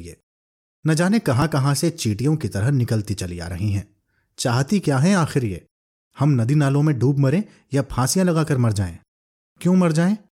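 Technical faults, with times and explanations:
No technical faults can be heard anywhere in the recording.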